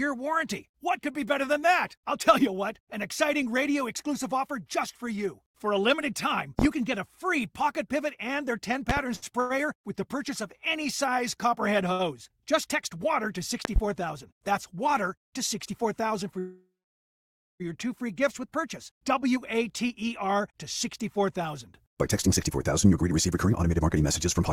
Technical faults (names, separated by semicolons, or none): loud pop; short stall from a late packet; jitter buffer speed-up; call audio freeze